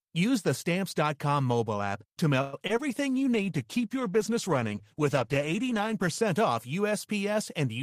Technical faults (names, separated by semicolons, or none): call audio freeze; short concealed packet loss; call bitrate drop